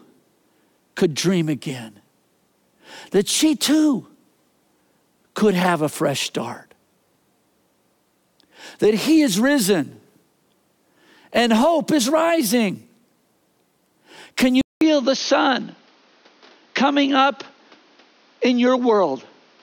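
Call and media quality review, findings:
Input switched to a poorer device, 14.61 s to end: speech cut off above 6.5 kHz, 200 ms silence at the switch, new noise floor about 35 dB below the speech, level roughly unchanged. Likely cause is an input device change mid-call, such as to a headset call profile. Unlike a codec bandwidth drop, the gap and the different background noise mark a physical source change.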